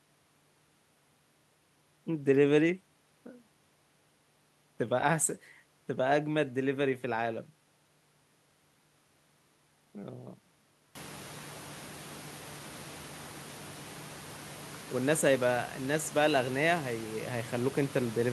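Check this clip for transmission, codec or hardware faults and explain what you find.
No transmission, codec or hardware faults.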